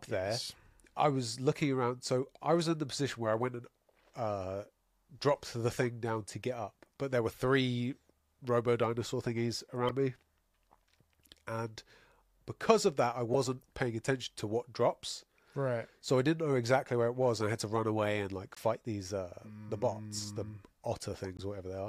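Speech clip with damaged data in a compressed stream: five brief blips at 5.34 s (before "the thing down to"), 9.88–9.91 s, 13.33 s (between "because of that I" and "paying attention to what"), 18.55–18.58 s (after "run away and like") and 21.37–21.40 s, where corrupted frames throw the decoder out of sync until it finds the next one.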